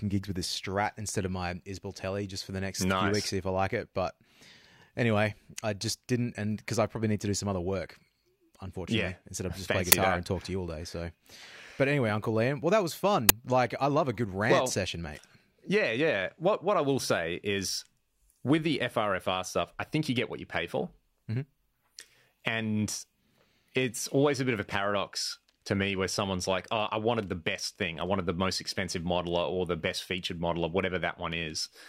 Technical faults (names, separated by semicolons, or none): uninitialised buffer